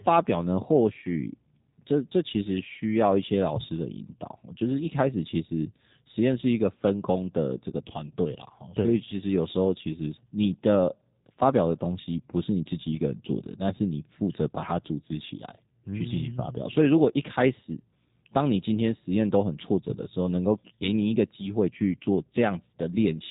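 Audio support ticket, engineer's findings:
G.729 codec damage, throughout, plainly audible. Band stops near 3.8 kHz; speech rebuilt from filter, pitch predictor and sparse pulses, hence rough, buzzy synthetic texture, consistent with 8 kbit/s CELP. Unlike a simple telephone band-limit, roughness persists inside the band.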